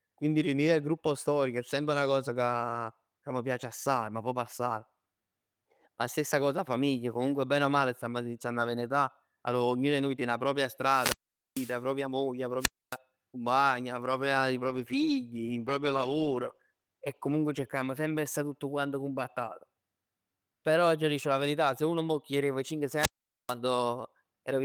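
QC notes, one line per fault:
10.80–11.83 s, 12.59–12.97 s, 22.96–23.56 s: wireless microphone squelch dropouts. Each time the radio link fades, hiss rises and the receiver's squelch mutes the output, leaving holes of near silence of about 0.45 s, 0.27 s and 0.44 s before the speech returns. The hiss around each hole distinguishes it from a clean digital gap.
14.70–17.69 s: call bitrate drop. The speech turns rough, watery and dull. For about 1.9 s it is at its coarsest, which fits the encoder falling from around 40 to 16 kbps and trimming the highs. Unlike a dropout, the sound never stops; only its quality worsens.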